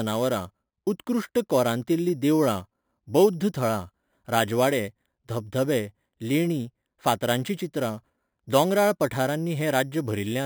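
Throughout, imaging from sample-and-hold upsampling adds a metallic fizz. Mirror images fill 5.5 to 11 kHz, about 19 dB down. That fits an 11 kHz source stepped up unfiltered.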